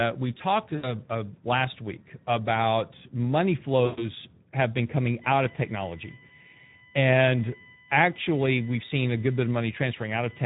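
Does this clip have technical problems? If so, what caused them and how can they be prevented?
Yes. The whole clip carries Speex codec damage: hoarse, noisy speech from too few bits for the excitation, which fits a low setting around 11 kbps. Raise the Speex quality or bitrate, or switch to a modern codec like Opus.

VoIP packet loss concealed by the speech codec hits at 0.75–0.94 s and 3.85–4.10 s, where the decoder stretches its last frame into a fading buzzy tone or coloured noise over gaps of about 80 and 120 ms. Use a jitter buffer with FEC or redundancy on a steadier network.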